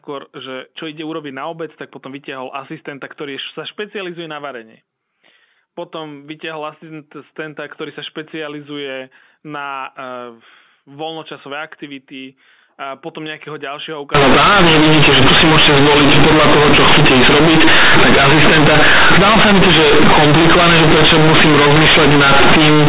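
From 14.15 s to the end at 22.89 s, mu-law bytes are played as linear 8-bit samples without expansion: companded audio read as linear. Each sign change flips the output across half its range, so quiet speech becomes loud, harsh buzzing distortion with heavy noise in pauses.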